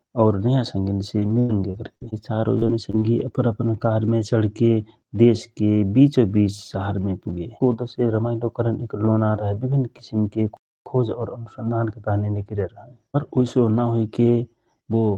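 Speech heard over a call-style path whose top end stops near 12 kHz, consistent with Opus at about 32 kbps. Two stretches turn choppy and robotic. The first runs from 1.19 to 2.03 s, between "और नयाँ" and "बे चारौ": five gaps, the longest 97 ms, covering about a quarter of that span. The second runs from 2.59 to 3.03 s, ending before "अपन अपन कारमे": four gaps, the longest 26 ms. Both are repeated packet loss, with each hole patched by stretching the preceding sound. At 10.57 s the audio falls silent for 292 ms before resuming, a playback stall, likely from the player running short of data or its thread being blocked.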